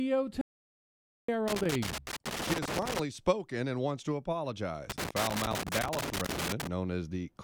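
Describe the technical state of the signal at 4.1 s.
At 4.1 s the audio is intact, with no audible technical fault at that moment.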